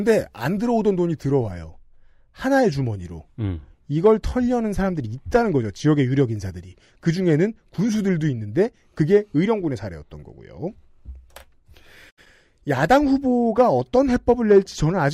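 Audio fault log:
0.61 s to the end, de-emphasis applied wrongly: the speech goes dull and muffled because a treble cut meant to undo pre-emphasis landed on audio that never had any, or was applied twice, so the top end slopes away smoothly, about 8 dB down at 10 kHz relative to 1 kHz.
12.09 to 12.20 s, digital broadcast dropout: the receiver lost the signal or frames failed their checksum, and it muted until good data returned. The speech fades out over about 20 ms and about 64 ms of it are simply gone, which fits a couple of dropped frames.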